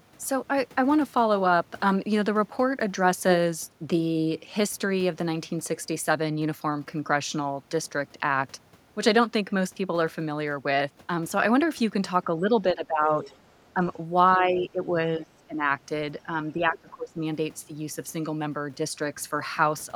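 From 12.27 to 12.53 s and 12.72 to 13.31 s, the speech dips: speech suppressed in double talk, likely an echo canceller turning down both talkers while the far side spoke. Drops range from a few decibels to about 20 dB. Further dips follow at 13.74 to 13.81 s, 14.38 to 14.95 s, 15.16 to 15.64 s and 16.52 to 17.19 s. Between 13.23 and 13.36 s, the other side's voice leaks through faintly, about 20 dB below the speech, likely echo the canceller failed to remove.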